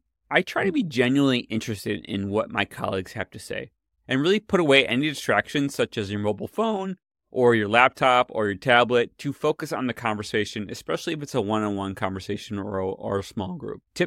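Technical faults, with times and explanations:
Nothing in the speech here stands out as a technical problem, so there's no fault to list.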